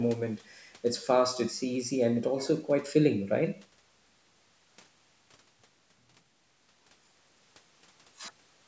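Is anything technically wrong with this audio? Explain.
No, nothing is technically wrong with this audio.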